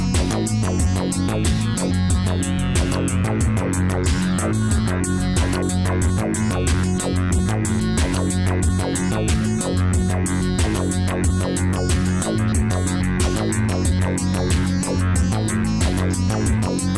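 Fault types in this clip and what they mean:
No technical faults can be heard anywhere in the audio, and the signal stays steady and intact throughout.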